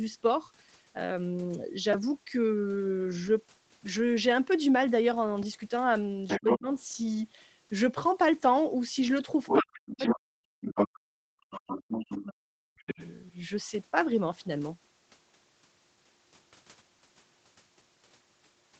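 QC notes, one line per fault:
1.93 s, repeated buffer: new audio failed to arrive in time, so the output device replayed its last block several times over instead of moving on. Each repeat is only about 2.9 ms long, which fits a 128-sample buffer, so the copies run together into a short click-like buzz with a pitch near 345 Hz rather than an audible stutter. About 10 ms of real audio is skipped in the process.
6.28–6.59 s, 9.46–10.15 s, 10.65–10.88 s, 11.52–12.23 s and 12.79–13.09 s, other side's voice leaking through: a second voice can be heard mixed under the main talker, most likely far-end sound from a loudspeaker that the echo canceller failed to subtract from the microphone. In the first three stretches it is about as loud as the main speech. In the last two it sits about 10 dB lower.
6.40–6.68 s, 9.61–11.79 s and 12.22–13.00 s, speech suppressed in double talk: the main talker's voice dips sharply or drops out in pieces while far-end sound plays on the loudspeaker, likely because the echo canceller, unable to separate the two, turned everything down. 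The first dip is about 25 dB deep and lasts about 150 ms in total. The later two go as deep as about 40 dB and affect about 2 s and 0.7 s.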